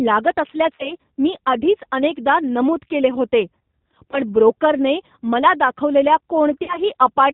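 From the start, the whole speech clip carries the sound of the G.729 codec. Nothing survives above 4 kHz, and the voice has a rough, slightly synthetic edge. That edge comes from rebuilding each 10 ms frame from a vocal tract filter, a pitch predictor and a handful of pulses, and it fits an 8 kbit/s stream. It differs from plain low-pass filtering: the texture itself is coarse, not merely dull.

From 0.75 to 0.94 s, just before "मी आधीच अनेकदा नमूद", packet loss concealed by the speech codec takes over. About 40 ms of audio is missing, which fits two lost packets. The decoder stretches its last pitch and filter into a sound that fades. The voice then stays weak and smeared for a while after audio resumes, because each frame builds on the damaged one before it. The same happens from 4.11 to 4.20 s, ahead of "ब्रोकरने मला दाखवलेल्या", with about 20 ms lost, and from 6.64 to 6.79 s, after "ब्रोकरने मला दाखवलेल्या", with about 40 ms lost. 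Unlike a dropout, there is no silence, only this decaying sound.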